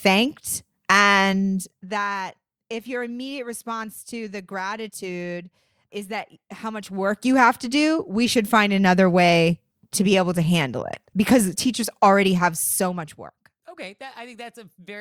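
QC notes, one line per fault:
1.3–2.2 s, zipper noise: fast ticking over the speech as the level drops roughly 15 dB before "if your immediate response", stepped about 50 times a second without smoothing.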